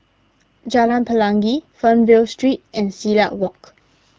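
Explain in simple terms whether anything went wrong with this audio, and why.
Two brief bursts of AMR bit errors occur, at 0.86 to 0.93 s and 3.39 to 3.49 s. Scrambled bits throw the phone codec's speech model off, so the speech turns hoarse and gargly. Unlike a dropout, the sound never goes silent and keeps its pitch and loudness.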